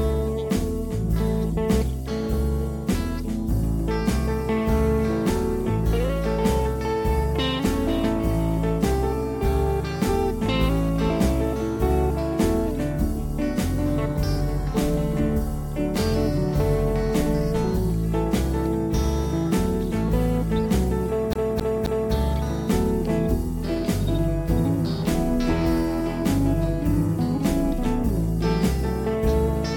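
A CD stuck on one turn appears from 21.33 to 22.13 s: a 265 ms segment repeats three times with brief mutes, as the laser jumps back one track.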